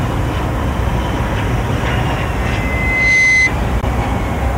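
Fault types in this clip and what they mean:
Loudspeaker feedback squeal: A single 2 kHz tone rises out of the sound at 2.36 s. The microphone picks up its own loudspeaker and the loop gain tops unity at that frequency, so the tone feeds itself. It swells over roughly three-quarters of a second to about 5 dB above the rest of the audio, then stops at 3.52 s. A spectrogram shows a horizontal line at 2 kHz brightening steadily. The waveform envelope fattens as the tone grows.
Bluetooth dropout: At 3.81 s the output cuts to silence for about 30 ms, then resumes at 3.84 s. The sound picks up further along, as though it had kept playing through the hole. The likely cause is audio packets missing their deadline on the wireless link and being discarded, and a single frame of around 15 ms was lost. The waveform shows a flat stretch, and the spectrogram shows a thin vertical blank strip.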